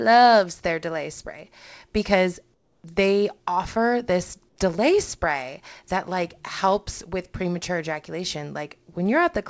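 Discontinuous transmission likely caused comfort noise in place of the background, twice. The sender stopped sending audio during pauses, and the receiver filled each gap with synthetic noise. From 2.54 to 2.84 s, between "their delay spray because" and "they offer this delay", the real background becomes a steady, featureless hiss about 4 dB quieter for 300 ms. From 4.49 to 4.58 s, between "because they offer this" and "delay spray that like", a 90 ms patch drops about 2 dB. Both sit under a call path with nothing above 8 kHz.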